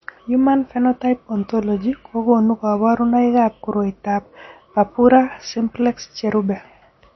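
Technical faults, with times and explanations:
Throughout: MP3 compression, likely at a low bitrate near 32 kbps. Nothing sounds above 5.9 kHz, and weak frequency lines flicker between frames, giving the speech a watery, swirling quality with smeared consonants. That flicker separates it from a simple low-pass filter, which dulls without swirling.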